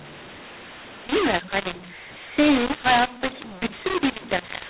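From start to finish the speech comes through harsh and grainy, the sign of mu-law and A-law mixed up: audio encoded as mu-law is being decoded as A-law. The two logarithmic curves disagree, so each level is remapped wrongly. Some peaks swell, others shrink, and near-silent samples are pushed well above zero. Unlike clipping, which only flattens the loudest moments, this roughness reaches the quiet stretches too, and the pauses between phrases fill with hiss.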